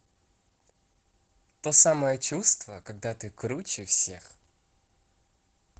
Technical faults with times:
0.00-5.79 Opus voice compression

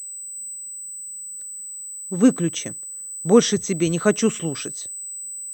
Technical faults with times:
0.00-5.53 USB whine

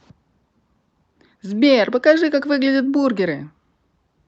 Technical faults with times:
none

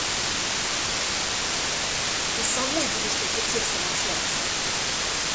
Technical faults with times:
0.00-5.35 low bit depth with dither

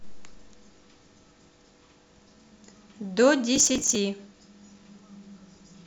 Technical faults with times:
3.56-3.95 processor overload crackle

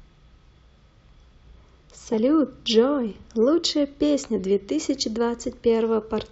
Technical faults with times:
2.12-2.15 compressed frames skipped

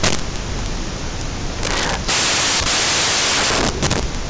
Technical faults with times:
0.00-4.30 samples built from the wrong bytes

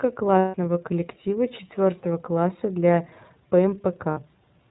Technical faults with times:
0.00-4.70 iLBC codec
0.39-0.55 lost iLBC frames
4.11-4.18 lost iLBC frames

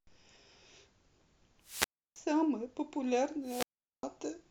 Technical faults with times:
1.63-2.19 wireless microphone squelch dropout
3.43-4.04 wireless microphone squelch dropout

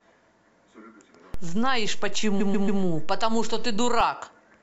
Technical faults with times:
1.34-4.01 DC step
2.39-2.81 repeated frames

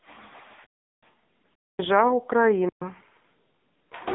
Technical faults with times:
0.00-4.15 AMR narrowband mobile codec
0.64-1.02 underrun with held sample
1.54-1.79 underrun with held sample
2.69-2.82 underrun with held sample

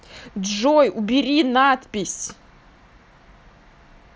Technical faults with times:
none

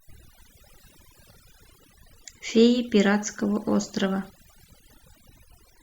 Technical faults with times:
0.00-5.82 overdone noise removal

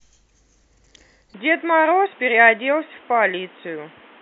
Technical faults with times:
1.34-4.21 input switched to a poorer device

